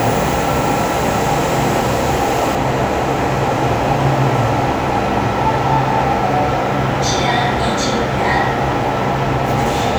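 From 0 to 2.55 s, pre-emphasis is left on. The treble boost from a CD-style 50/15 µs curve was never undone by its matching de-emphasis. Highs sit about 8 dB too strong at 10 kHz. The sound turns thin, bright and hissy.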